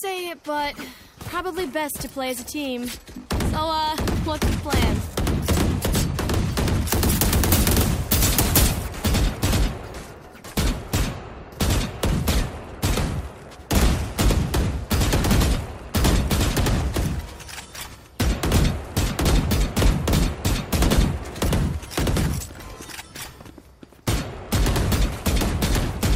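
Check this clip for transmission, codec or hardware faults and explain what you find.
One fault appears, confined to a two-second stretch. Pre-emphasis left on, from 6.88 to 8.88 s: the treble boost applied before transmission, matching the 50 µs curve used in FM broadcasting, was never undone by the corresponding de-emphasis cut. High frequencies therefore sit about 10 dB too strong at 10 kHz relative to 1 kHz. For those two seconds the sound turns thin and overly bright, with sharp, hissy sibilance, then returns to its earlier balance.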